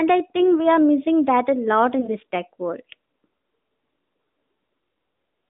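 At 0.38 to 0.61 s and again at 2.00 to 2.09 s, single lost AMR speech frames, 20 ms each, produce a brief dip or warble. The decoder fills each missing frame by repeating the previous frame's pitch and vocal-tract settings at reduced gain, and the speech recovers weak or rough for a moment. Unlike a hard dropout, there is no clean silence or click, only a smeared, softened moment within the narrowband telephone sound.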